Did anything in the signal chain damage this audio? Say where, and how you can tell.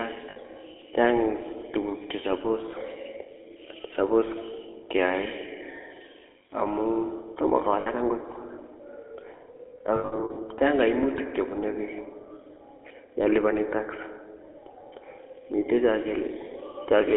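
Yes, at the codec stage. The whole clip carries GSM full-rate codec damage, and it is plainly audible. Speech sits in a narrow 150 Hz to 3.4 kHz band. It has a buzzy, gravelly roughness, which fits 13 kbps full-rate GSM. The codec models the vocal tract and drives it with a sparse, regularly spaced pulse excitation.

There are also lost GSM frames, from the network or radio link. Short metallic rings come at 0.30 to 0.37 s and at 7.80 to 7.87 s, just after "amun tomo". Each lasts about 60 ms, which fits three 20 ms frames. From 9.96 to 10.38 s, just before "chang koimutik chebunu", about 260 ms of dropouts are scattered over 400 ms. The longest run is around 70 ms. In each gap the decoder repeats the last good frame.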